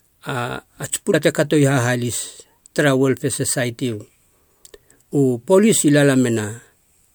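A broken MP3 bit reservoir likely causes the glitch from 1.12 to 1.15 s, where the speech briefly skips forward. Frames dropped upstream leave the next frame reading its borrowed data from the wrong bytes, and the damage spans roughly one frame, consistent with 24 ms frames.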